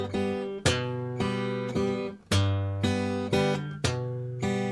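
No technical faults can be heard anywhere in this audio.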